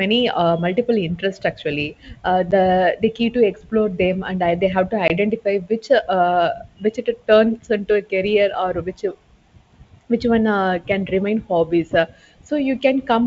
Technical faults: packet loss on an ADPCM call

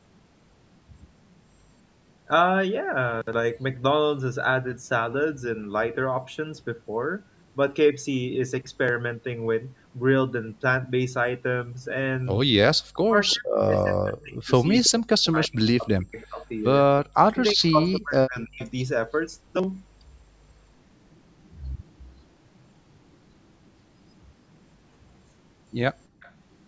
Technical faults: speech suppressed in double talk; echo leak; background gated by the echo canceller

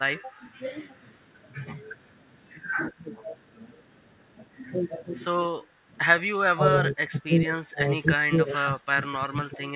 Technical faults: speech suppressed in double talk; echo leak; background gated by the echo canceller

